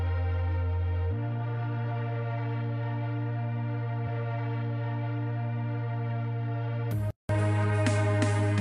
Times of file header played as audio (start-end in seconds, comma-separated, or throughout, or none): none